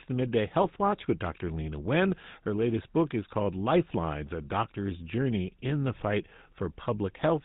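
From start to finish the speech carries GSM full-rate codec damage: a plainly buzzy, gravelly texture, consistent with a 13 kbps GSM coder rebuilding the voice from a vocal-tract filter driven by coarse pulse excitation. A spectrogram would show nothing above 4 kHz and smeared, grainy harmonics.

Between 0.62 and 0.70 s, GSM bit errors break the sound into a brief squawk and gargle, as corrupted filter, pitch and gain values reach the decoder. Roughly four 20 ms frames fit that span, and the error rate was probably around 2%. The waveform would jump in level there, and the spectrogram would show distorted, displaced bands.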